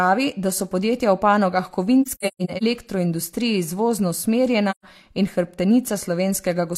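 From 2.02 to 2.63 s the speech breaks into scattered silent gaps totalling about 340 ms, the longest around 150 ms, then one 128 ms hole at 4.70 to 4.84 s. This is AAC frame loss with muting. The zeroed frames fade out and in through overlapping windows, so unlike a hard dropout the gaps have soft edges.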